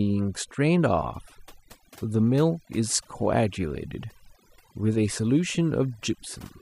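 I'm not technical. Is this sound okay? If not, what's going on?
No, it has overdone noise removal running through the whole clip. A cleanup tool was pushed too hard, so the background drops and breaks up into little twinkly specks, and the quieter bits of the voice get scooped out too.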